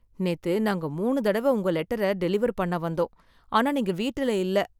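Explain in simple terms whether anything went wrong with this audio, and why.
Nothing went wrong here; no faults can be heard.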